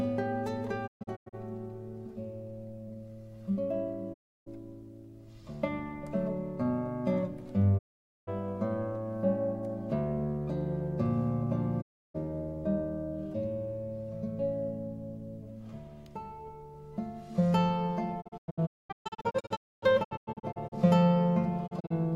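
You get a digital broadcast dropout six times here, at 0.86 to 1.35 s, 4.12 to 4.48 s, 7.77 to 8.29 s, 11.80 to 12.16 s, 18.20 to 20.74 s and 21.66 to 21.96 s. The receiver mutes whenever frames fail, so the sound ducks to silence over about 20 ms and returns later, with the missing material simply gone. The first, fifth and last break into several short holes, which fits 32 ms frames.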